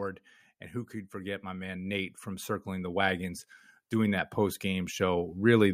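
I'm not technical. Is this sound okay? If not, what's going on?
No. The recording's automatic gain control decided the input was too quiet and kept turning itself up, a fault called automatic gain rising. It happens twice: from 1.11 to 3.3 seconds, just after "and who could", and again from 3.9 to 5.72 seconds. Each time the voice and the background noise swell louder together over a second or two, so the level creeps upward instead of staying steady. The first rise is the stronger of the two.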